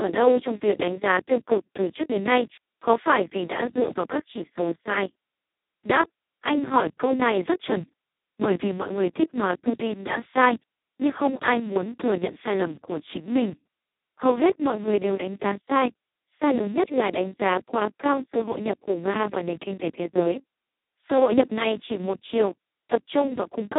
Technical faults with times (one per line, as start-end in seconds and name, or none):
0.00-23.78 Speex codec